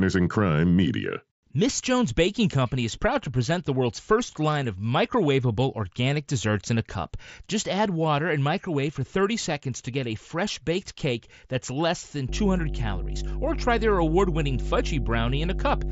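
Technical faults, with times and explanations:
12.29 to 15.91 s, mains hum: a steady low 50 Hz drone with a few low harmonics comes in and sits close to the speech level, only a few decibels under it. It's the power line leaking into the signal, most likely through a ground loop or a nearby transformer.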